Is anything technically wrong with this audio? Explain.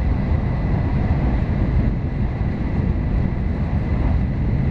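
Yes. At 3.07 s and 4.18 s the sound jumps ahead, by roughly 0.2 s and 0.3 s. These are compressed frames skipped: the decoder drops whole frames, which fits a frame length of about 46 ms.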